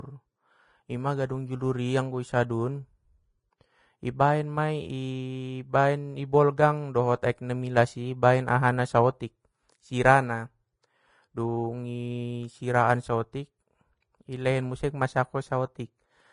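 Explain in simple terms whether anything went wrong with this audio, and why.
Vorbis compression, from start to finish: the speech sounds hissy and grainy, with nothing above about 10.5 kHz. The likely cause is a low-quality Vorbis encode that cut the treble and stored what remained so coarsely that fine detail turned into noise.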